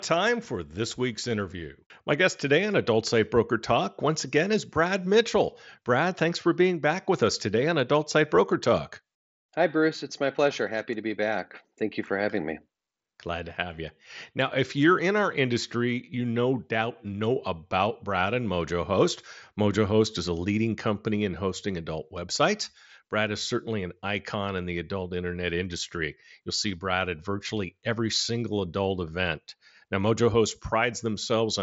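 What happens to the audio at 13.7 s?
Nothing goes wrong at 13.7 s; the speech carries on intact through the Bluetooth mSBC headset codec, band-limited to about 7.7 kHz.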